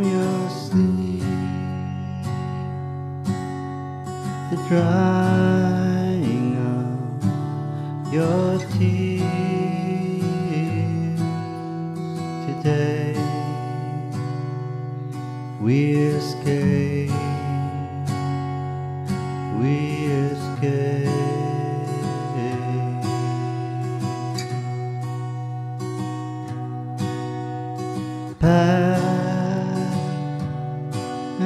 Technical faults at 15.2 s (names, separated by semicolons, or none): none